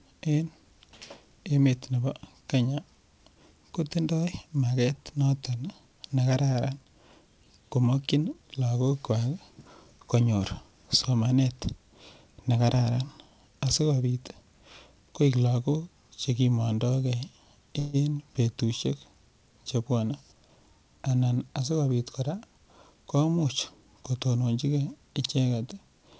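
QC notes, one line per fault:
6.53–6.57 s, short stall from a late packet: one packet arrived late and the jitter buffer briefly ran dry, so the receiver stretched the last sound by about 16 ms to cover it. Nothing is lost, but the sound hangs slightly with a faint buzz or dip.
17.79–17.97 s, call audio freeze: the sound stops moving forward and the last fragment is drawn out as a fading buzz or hiss for about 146 ms, likely from packets held up in transit emptying the jitter buffer. It never drops to silence, and no audio is lost.
19.80–20.57 s and 21.37–22.30 s, jitter buffer speed-up: after the freeze, the buffer holds surplus audio. The receiver trims pitch-period-sized pieces to cut the delay, removing roughly 100 ms at 110% speed, then roughly 50 ms at 104%. The speech sounds hurried at unchanged pitch in the first stretch, and the G.722 band (nothing above 8 kHz) stays the same.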